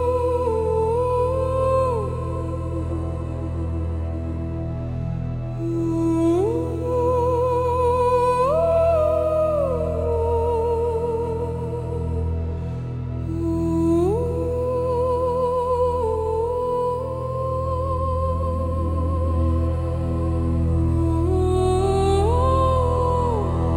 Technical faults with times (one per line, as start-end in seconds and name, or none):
20.68-23.76 mains hum